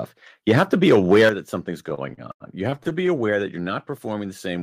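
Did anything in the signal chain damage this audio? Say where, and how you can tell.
Yes. From 0.48 to 1.29 s, just before "that something's", the loudest syllables turn harsh and crackly, with peaks flattened about 5 dB over full scale and around one sample in twenty clipped. This is microphone overload at the converter, likely from input gain set too high.

At 1.29 s, right where "that something's" begins, voice and background together drop by about 8 dB in a single step, straight after the distorted stretch. This is the microphone volume stepped down, likely by the call processing reacting to the clipping and lowering device input gain.

Between 1.89 and 3.09 s, after "that something's" and before "that you're not", the audio drags and stutters through more than a dozen short stalls, the longest 89 ms. Each is filled by stretching the previous sound, faded in longer waits, so nothing is lost, but about 22% of that span is concealment. 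These are repeated stalls (stutter): late network packets keep emptying the jitter buffer.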